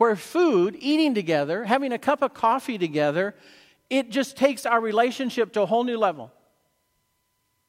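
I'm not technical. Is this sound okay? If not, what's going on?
Yes, nothing is wrong with this speech recording.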